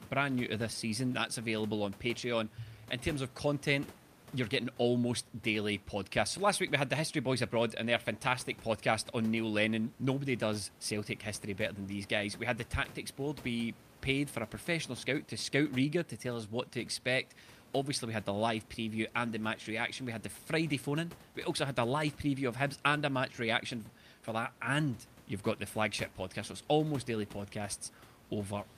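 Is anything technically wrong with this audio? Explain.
No, nothing technically wrong turns up in this speech recording; the only thing under the speech is the room's own background noise, sitting about 22 dB down, which belongs to the recording environment.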